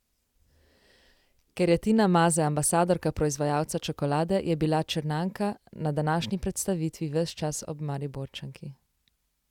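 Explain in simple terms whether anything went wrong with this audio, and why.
Listening to the recording, nothing stood out as having gone wrong, so there is no fault to explain.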